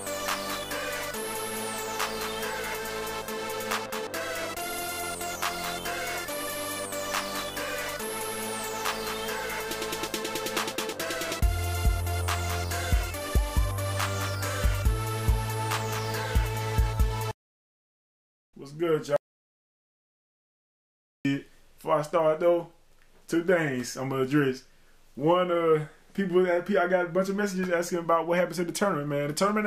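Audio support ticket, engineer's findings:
Audio dropout to silence, 19.16 to 21.25 s. Signal cuts mid-flow to silence, no room tone, resumes abruptly; about 2.09 s of content lost. Likely input-side loss (device disconnect, link failure or mute) while recorder kept writing silence.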